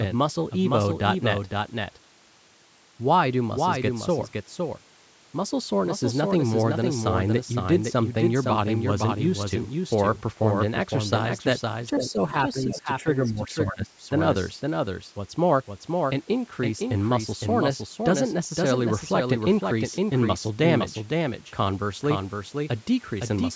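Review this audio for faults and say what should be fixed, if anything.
Doubled audio track, throughout the clip: a second full-band copy of the speech trails the original by roughly half a second, only about 5 dB quieter. It carries no reverberant tail or room colour, so it sounds like a flat, mechanical repeat rather than an echo. The likely cause is the same signal reaching the mix twice, through a second, slower capture path or an edit that left two offset copies. To prevent it, route each source into the mix once and check edits for duplicated layers.

Speech suppressed in double talk, at 11.93–12.34 s, 12.54–13.07 s and 13.26–14.11 s: the talker's level drops in pieces while the far side is also speaking, by about 10 dB in the first stretch, about 15 dB in the second and about 25 dB in the third, which is the longest and deepest. The likely cause is an echo canceller that could not tell the near talker from loudspeaker echo during overlapping speech, so it attenuated both. 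The band-limiting to 8 kHz comes from the call's microphone processing and is not part of this fault. To prevent it, use a headset or an echo canceller with better double-talk handling.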